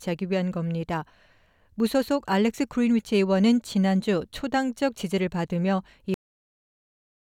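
A cut-off end at 6.14 s: the audio stops mid-sound and drops straight to digital silence with no decay, staying silent for the remaining 1.2 s or so, because the final buffers were never written or played out, so the sound is severed rather than ending.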